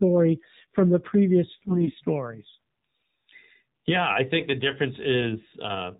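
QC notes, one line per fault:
Throughout: AMR narrowband mobile codec, muffled, buzzy, synthetic-sounding speech with nothing above 4 kHz, consistent with AMR-NB squeezed to a low bitrate near 7.4 kbps.
1.58–1.95 s: AMR bit errors, right after "from the previous" the voice turns hoarse, scratchy and gargly while keeping pitch and level, as roughly 5 percent flipped bits misplace excitation pulses.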